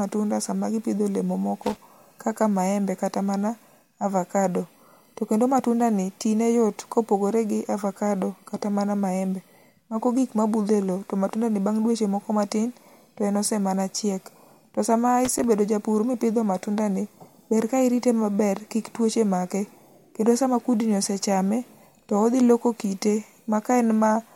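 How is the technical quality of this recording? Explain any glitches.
The speech has two short bursts of loose connector crackle. The first runs from 1.62 to 1.76 s, right after "sama gipidho olemo" and just before "kaka maembe kata mana". The second runs from 15.25 to 15.44 s, ending just before "japur mipidho matundani ber". In both, a worn or dirty contact somewhere in the cable or jack was shifting, so the connection kept making and breaking. That chops the signal into an irregular scratchy crackle lasting a fraction of a second each time.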